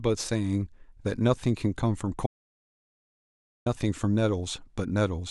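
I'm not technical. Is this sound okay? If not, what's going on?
No. Around 2.26 seconds, the incoming audio was most likely interrupted, perhaps by a loose connection or a brief accidental mute, while the recording kept running and filled the gap with nothing. This is an audio dropout to silence. The speech cuts off abruptly and returns at 3.66 seconds, leaving about 1.4 seconds of complete dead silence, with not even faint background noise. Whatever was said in that stretch is lost.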